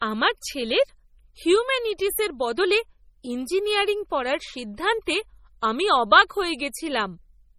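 Throughout the speech, the sound is watery and swirly, with metallic chirps on s sounds, smeared attacks and nothing above 15.3 kHz. The cause is likely heavy MP3 compression at a rate that fits 32 kbps, with weak frequency lines flickering on and off between frames.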